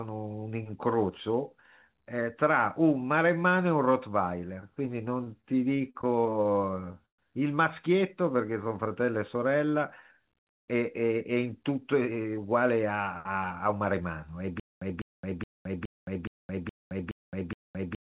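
Repeated stalls (stutter) run from 5.24 to 7.21 s: late packets emptied the jitter buffer thirteen times, each gap bridged by continuing the last sound, up to 130 ms. Nothing is lost, but the speech drags and stutters.

Jitter buffer slow-down follows from 8.21 to 9.72 s. The receiver repeated pitch periods to rebuild its reserve, adding 166 ms, so speech runs at 89% speed with unchanged pitch and drawn-out sounds.

Jitter buffer speed-up appears from 11.69 to 14.02 s. Excess buffered audio was trimmed by cutting short pitch-period pieces, about a fifth of a second in all, making speech hurry at 109%.

Stutter with silent gaps starts at 14.60 s and lasts to the end. A 202 ms fragment repeats every 419 ms with 217 ms of digital silence between, likely from a stalled stream replaying its last fragment at each retry, and the speech meant for that stretch is lost.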